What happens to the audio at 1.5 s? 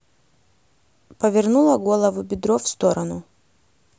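Nothing goes wrong at 1.5 s; the speech carries on intact there, with no dropout, click or distortion.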